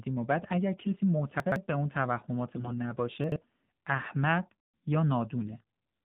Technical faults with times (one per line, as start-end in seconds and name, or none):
0.00-6.05 AMR narrowband mobile codec
0.78-0.93 AMR bit errors
1.40-1.56 chunks out of order
2.56-2.74 AMR bit errors
3.24-3.36 chunks out of order